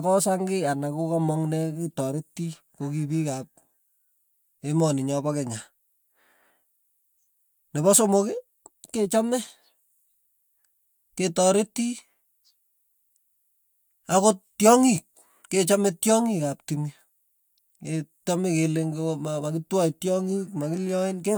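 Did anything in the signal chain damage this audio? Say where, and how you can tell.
No, nothing in the signal chain damaged this audio.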